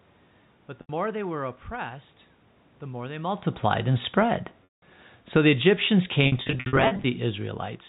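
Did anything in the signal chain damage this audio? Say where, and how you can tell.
Yes, at two stages: the network and the call processing.

On the network side, packets were dropped and the receiver covered each gap with packet loss concealment, repeating the last pitch period and fading it out. At 0.81 s an 80 ms hole comes out as a briefly held, buzzy tone, which fits 10 ms packets. At 4.64 s the 180 ms gap outlasts the fade, so the sound drops to silence until 4.82 s and returns through a short cross-fade. From 6.24 to 7.04 s, 440 ms of losses are scattered over 800 ms in runs of up to 60 ms, giving a string of stuttering, buzzy holds.

In call processing, the automatic gain control falls: it judged the level too high and pulled its gain down by about 5 dB between 5.21 and 7.48 s. The signal sinks gradually, and the room noise sinks with it. That is how this differs from the talker moving around 3.0 s, where the voice level changes but the background stays put.

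Within that slow fall, the automatic gain rises: from 5.55 to 6.1 s the control briefly raises gain by about 5 dB, so voice and background swell together for about half a second before the downward trend continues. This gain change is also heard over the 64 kbps G.711 A-law telephone band, which passes nothing above 4 kHz.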